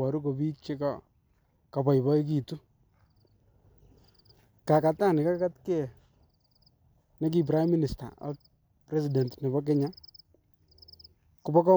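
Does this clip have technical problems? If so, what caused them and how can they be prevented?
No, the speech signal shows no technical faults, so there is nothing here that needs preventing.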